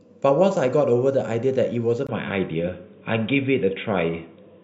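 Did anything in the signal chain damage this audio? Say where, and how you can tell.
Yes. At 2.07 s the speech drops out for about 20 ms. It returns duller and boxier. From there to the end, nothing reaches above 3.8 kHz. The level also shifts a little, and a faint new noise floor sits well below the speech. This points to the capture stage: an input switched to a poorer device, likely a second microphone or a headset's call profile. That device has a narrower band, its own tone and its own background noise.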